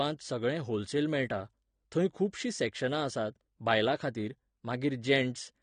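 From start to finish the speech sounds dull and smeared, with a watery warble on sustained sounds and a fizzy, swirling edge on sibilants. The damage is plainly audible throughout. The likely cause is AAC compression, of the AAC-LC kind, at a low bitrate that points to around 32 kbps. At that rate the encoder has too few bits for each frame, so it trims the top of the spectrum and coarsely quantises what remains, leaving the characteristic blur and shimmer.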